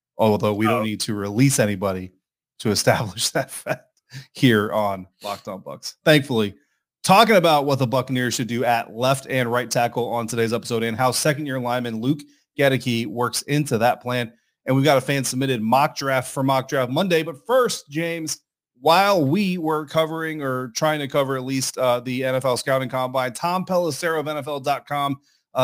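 A speech recording carries crude rate conversion from start to finish. The resampling appears to have been done by nearest-sample picking, repeating samples with no interpolation or anti-aliasing filter, and the pattern of repeats fits a step from 32 kHz up to 44.1 kHz. The error sits only about 20 dB below the speech, producing a gritty, inharmonic fizz that rides on louder syllables and sibilants.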